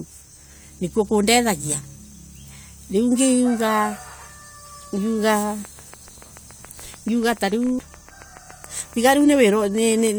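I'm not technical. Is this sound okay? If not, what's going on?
No. A train of clicks runs from 5.36 s to 10.08 s: a steady ticking, about seven clicks every second and around thirty in all, each one much the same and roughly as loud as the speech itself. Because the clicks sit on top of the sound, they carry on through the pauses too. The likely cause is electrical interference from nearby equipment, or a faulty connection or power supply injecting a pulse over and over.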